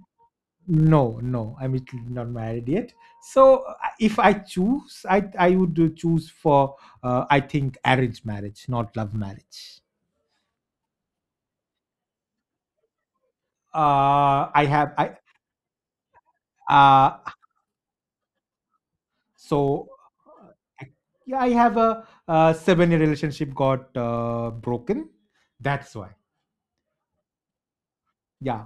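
Throughout the speech, a steady buzz near 86 Hz rides under the signal, rising and falling with its level. This is a filter restarted on every block: each block begins from zero state, leaving a small transient at the boundary, which fits a 512-sample buffer.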